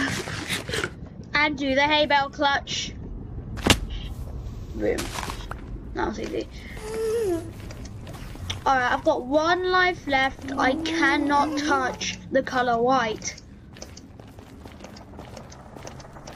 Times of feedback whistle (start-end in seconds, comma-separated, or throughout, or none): none